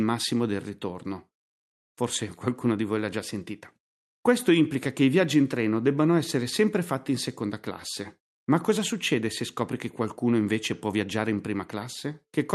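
A speech recording that passed through a call path, with the high frequencies rolled off near 12 kHz, which fits an Opus link. From 8.19 s to 11.30 s there is a jitter buffer speed-up. The receiver had built up more audio than it wanted. It trimmed short pitch-period slices over and over to catch up. Delivery runs about 6% fast while the pitch stays unchanged. About a fifth of a second is dropped in total. The passage sounds slightly hurried.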